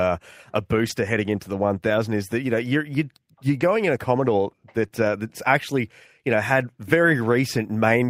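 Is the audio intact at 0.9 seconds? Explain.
No. Between 0.85 and 0.91 s two lost packets were rebuilt from error correction: the decoder substituted low-bitrate copies of about 40 ms, so the speech continues without a gap but sounds rougher and noisier.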